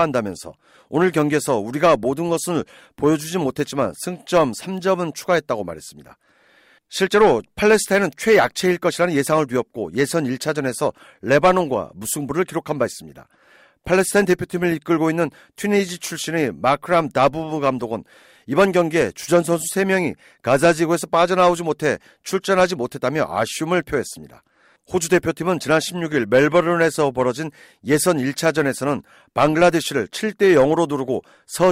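At 17.90 s a single bit flipped somewhere in memory or on a digital link, knocking one sample off by a power of two before the next sample returned to normal. This bit error spike reaches about -34 dBFS and sounds as one brief, broadband tick unrelated to the speech around it.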